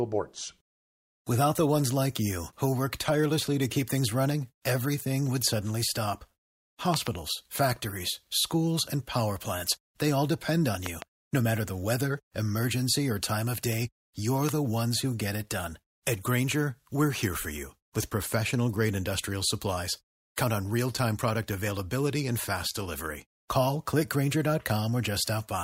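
At 6.94 to 7.09 s, just before "factories schools and power", a loud pop arrives as two quick pops. They stand roughly 20 dB above the speech. At 10.86 to 11.04 s, after "they all depend on", another double pop comes, about 15 dB up. At 14.49 to 14.51 s, between "time of day you're" and "the ones who get", a single pop hits, around 20 dB up. Each is likely a sudden voltage pulse from a plug, switch, static or driver glitch. Speech continues underneath.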